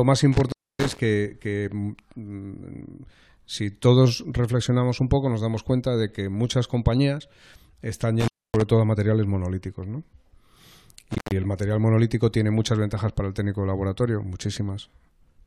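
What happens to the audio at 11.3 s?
An intermittent contact runs from about 11.11 to 11.32 s, so 11.3 s falls right at its tail. A loose cable or plug connection breaks for roughly 169 ms, and the speech drops out abruptly for that stretch. The moments the contact opens and closes again come through as short crackles at each edge of the gap, and in between, with the signal path broken, a faint hiss remains until the connection restores itself.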